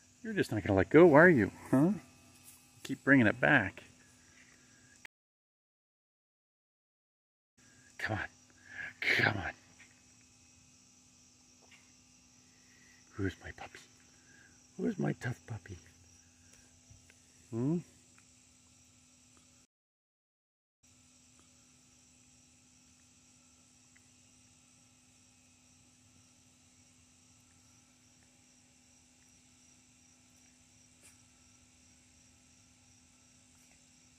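At 5.06 s the audio drops out for 2.5 s, a stream reconnect. The connection broke, and the player reconnected and started a new decoder partway through the stream. When sound returns around 8.0 s, it jumps back 0.44 s and repeats material, because the server resent a burst. The first frame fades in. At 19.65 s it happens again: 1.16 s of silence, then playback resumes near 21.67 s, 0.86 s earlier than where it stopped.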